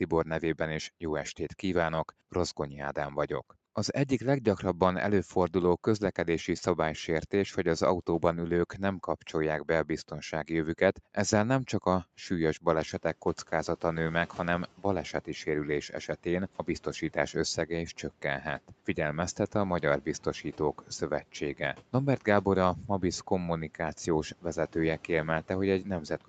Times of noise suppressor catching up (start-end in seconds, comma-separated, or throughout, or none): 12.79-13.16